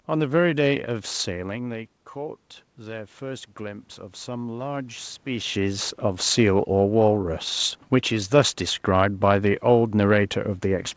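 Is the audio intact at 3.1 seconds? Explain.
No, at 3.1 s you're in the middle of an automatic gain rise that runs from about 1.26 to 6.33 s. The level at the mic fell by about 12 dB, likely because the talker moved back around the 1 s mark, so the automatic gain control starts pushing its gain up, by about 7 dB in total. Since it scales everything, the voice and the room noise swell up together, slowly, over those five seconds.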